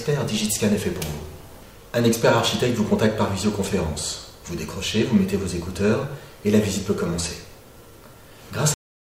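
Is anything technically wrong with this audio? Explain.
Yes, there is a cut-off end at 8.74 s. The final buffers were never written, so the sound stops mid-event and drops straight to digital silence with no decay.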